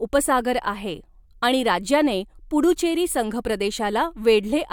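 Nothing in this bit of speech stands out as a technical fault; it runs along without any glitch worth pointing to.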